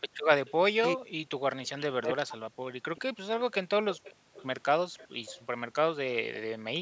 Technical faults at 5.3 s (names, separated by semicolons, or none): echo leak